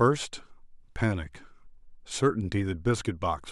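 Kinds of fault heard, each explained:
No technical fault can be heard anywhere in the speech recording, so there is nothing to list.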